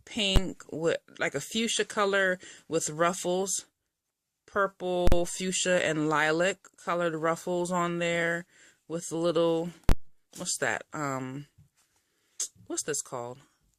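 At 0.36 s, 5.07 to 5.12 s and 9.89 to 9.92 s, invalid numbers at full scale appear. Non-finite values were clamped to the maximum sample, heard as a single bang at 0.36 s and as pops bracketing a silent gap later, fitting 512-, 2048- and 1024-sample blocks.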